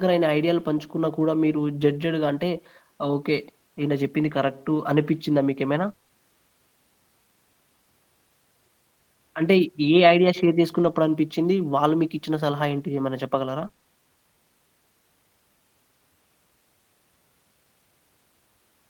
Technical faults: scattered short gaps

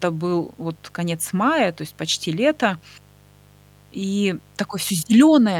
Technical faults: mains buzz

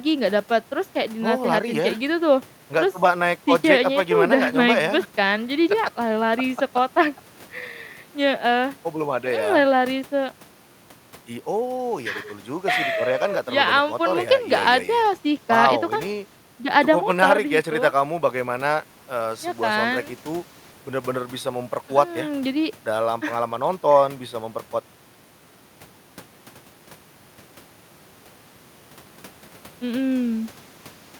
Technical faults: none

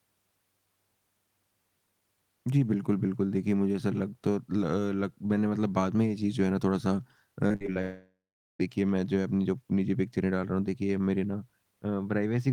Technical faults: repeated packet loss (robotic sound); long network dropout

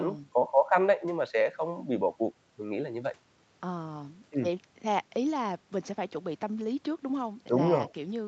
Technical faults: none

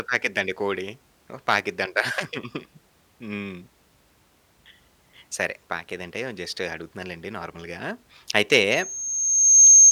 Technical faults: loudspeaker feedback squeal

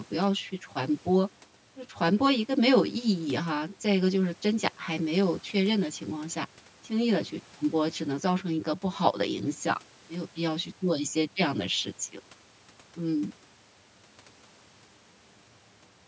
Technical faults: channel delay (comb filtering)

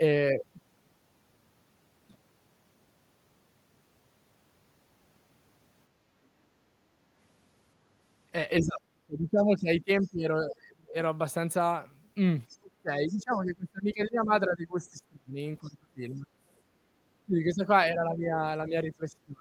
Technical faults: speech suppressed in double talk; other side's voice leaking through

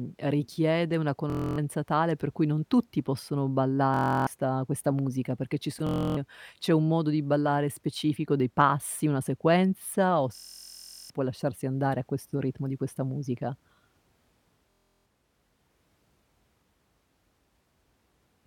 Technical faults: Bluetooth stutter

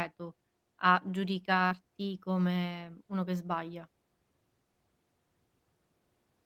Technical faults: short concealed packet loss

